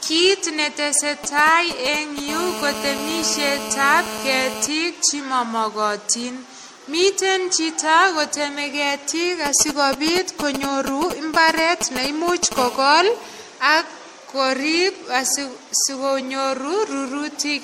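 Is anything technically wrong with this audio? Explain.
Yes. There are three problems: a lossy-coding degradation across the whole recording, and two kinds of interference from a nearby 2G mobile phone.

Generation loss affects the full length of the speech. The sound is swirly, smeared and hollow, consonant onsets are blurred, and nothing is present above 16.2 kHz. The most likely cause is repeated MP3 coding, around seven passes, which fits a 64 kbit/s chain. Each decode and re-encode quantises the signal again on a shifted frame grid, so the noise and spectral gaps from every pass accumulate.

GSM signalling bursts occur from 1.24 to 2.20 s and from 9.46 to 12.54 s, the second starting just after "chito koteme ketiik". Both times they sit close to the speech level. They are heard as a galloping dit-dit-dit of short buzzes at the 217 Hz burst rate. The phone is exchanging brief signalling with the network rather than carrying a call, and the audio circuitry rectifies those intermittent radio pulses into short audible buzzes.

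GSM phone buzz appears from 2.28 to 4.68 s, ending just before "che mamagatin", at about 8 dB below the speech. It appears again from 12.57 to 13.43 s, before "ak korip", at about 14 dB below. Here the phone is in a call and transmits continuously in bursts 217 times a second. Rectified by the audio electronics, this gives a hard, raspy, harmonic-rich 217 Hz buzz that has no relation to the speech.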